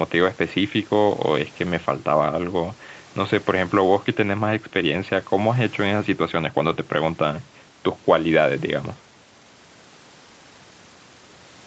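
No technical faults are audible anywhere in this speech.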